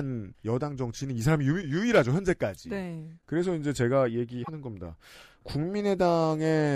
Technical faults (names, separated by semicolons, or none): damaged data in a compressed stream